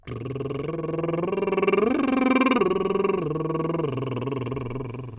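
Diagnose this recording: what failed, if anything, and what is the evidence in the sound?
Nothing failed; the music shows no audible fault anywhere.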